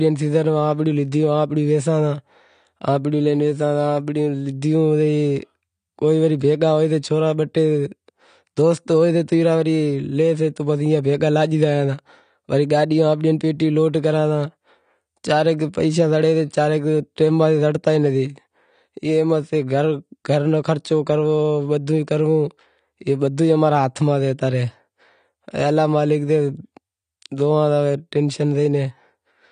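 Throughout the speech, the audio was likely passed through AAC compression at a low bitrate, which fits a 32 kbps AAC-LC stream. The encoder removes everything above 9.8 kHz and coarsely quantises what remains, so the sound is dull and smeared, with plainly audible codec damage.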